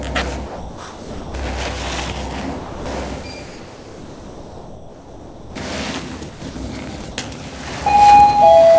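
From 0.46 to 1.34 s, sound is dropped by the voice detector, most likely because the sender judged it to be background and stopped transmitting. For 880 ms the receiver plays steady synthetic noise, and about 470 ms of real sound disappears under it before the detector triggers again. The same happens from 2.58 to 2.86 s, where 280 ms is replaced and about 250 ms of sound is lost.

From 3.46 to 5.56 s, comfort noise takes the place of the background. The real background sits about 22 dB below the loud parts. Once the sender likely stops sending, the detailed ambience turns into a flat, featureless hiss about 3 dB quieter for 2.1 s. A short patch at 6.30 to 6.42 s does the same for 120 ms and drops about 5 dB.

Two more dropouts from the voice detector follow. From 6.50 to 6.56 s, 60 ms is filled with noise and about 40 ms of sound is lost. From 7.02 to 7.04 s, about 10 ms is lost within a 20 ms gap. 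Throughout the clip, nothing above 8 kHz comes through, which fits a wideband call codec.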